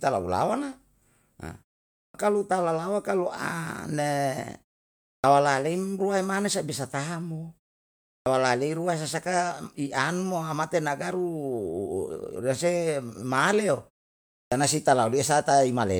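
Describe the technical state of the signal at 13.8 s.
At 13.8 s the speech signal is intact, with no fault present at that moment.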